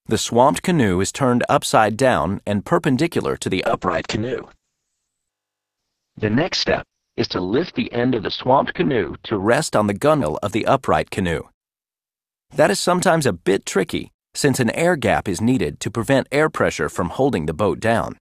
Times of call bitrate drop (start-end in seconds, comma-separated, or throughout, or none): 3.66-9.51